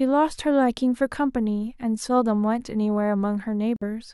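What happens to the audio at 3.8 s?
Interference likely delayed the wireless packets, so the headphone buffer ran empty and playback halted: a Bluetooth stall from 3.76 to 3.83 s. The speech drops out into about 52 ms of silence, then resumes where it broke off.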